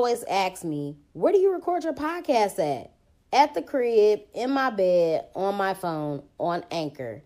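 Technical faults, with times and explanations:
3.31 s, compressed frames skipped: Right after "record your podcast at" the speech lurches forward with a soft, smeared blip rather than a sharp click, and around a tenth of a second of sound simply never arrives. Whole blocks of encoded audio were dropped or rejected by the decoder, so playback jumps ahead by a few frames at once. The gap points to roughly four frames of about 26 ms each. The overlap between neighbouring frames blurs the join instead of leaving a hard edge.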